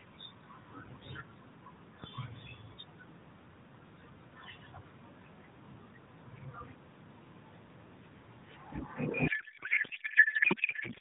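At 9.28 s a codec payload misread begins and runs to the end at 11.00 s. The AMR frames were packed octet-aligned but are being read as bandwidth-efficient. Every field lands in the wrong place. The speech turns to garbled noise and warble that barely tracks it.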